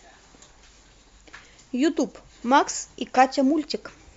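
No technical faults are audible.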